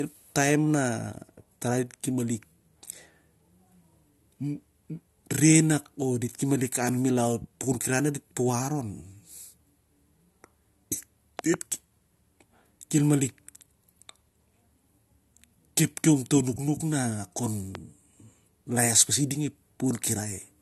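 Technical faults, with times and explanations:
Throughout: low-bitrate audio saved at a high bitrate. Nothing above 12.7 kHz, likely from an earlier low-bitrate AAC pass re-saved as MP3, so the lost top end stays lost.
11.39–11.56 s: loud pop. Two sharp pops, about 15 dB over the speech, likely a voltage spike from a plug or switch riding on top.
17.75–17.77 s: loud pop. A single pop about 10 dB above the speech, likely the same kind of electrical step, with the talking carrying on underneath.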